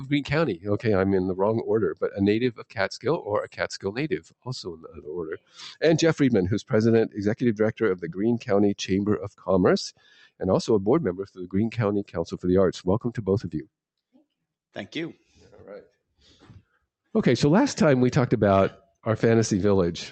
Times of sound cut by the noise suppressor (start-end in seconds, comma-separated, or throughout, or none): 0.00-0.86, 1.94-5.83, 6.63-7.19, 7.74-8.50, 9.18-10.43, 11.17-12.46, 13.05-16.83